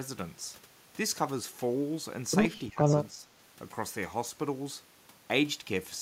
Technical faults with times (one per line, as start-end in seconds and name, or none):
2.69-2.79 speech suppressed in double talk
3.11-3.28 speech suppressed in double talk